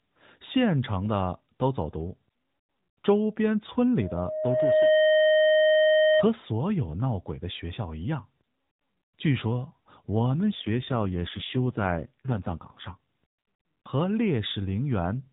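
From 3.99 s to 6.26 s a loudspeaker feedback squeal takes over. The microphone is picking up the loudspeaker it feeds, and at 622 Hz the loop gain has passed one, so that frequency keeps feeding itself. It swells over about a second into a steady, piercing tone that ends up a little louder than the speech. On a spectrogram it is a single bright horizontal line at 622 Hz that thickens as it grows. The waveform envelope rises steadily until the tone dominates.

From 10.43 s to 12.97 s comes an AMR rate drop. The speech keeps the same narrowband character as the rest of the clip, with nothing above 4 kHz, and there is no gap. Instead the voice turns buzzier and more synthetic. That fits the mobile codec being told to fall from about 12.2 kbps to about 5.9 kbps so it can spend more bits protecting a weak radio link. On a spectrogram the harmonic striations become smeared and coarser below 4 kHz. 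The waveform level stays unchanged.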